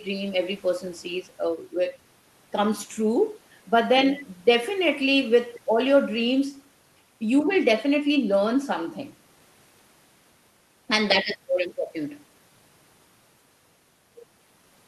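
Nothing in the speech stood out as a technical fault when listened to.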